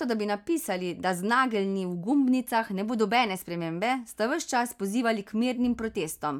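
No technical faults can be heard in the speech recording at any point.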